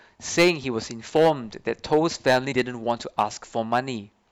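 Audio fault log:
0.38–0.50 s, 1.16–1.30 s, 1.93–3.23 s and 3.73–3.79 s, hard clipping: the loud parts of the speech turn harsh and crackly, with a gritty fuzz through the long stretch from 1.93 to 3.23 s. The signal is driven about 9, 6, 8 and 3 dB past what the stage can pass, so its peaks are sliced flat. Those squared-off tops add high harmonics that were never in the voice, and the last overload is the lightest.
2.49–2.53 s, damaged data in a compressed stream: a short glitch of about 40 ms cuts across the clipped speech. Part of the encoded stream there is corrupt, so the decoder misreads those frames, loses its place and hunts for the next valid frame header. The garbled output is what makes the glitch.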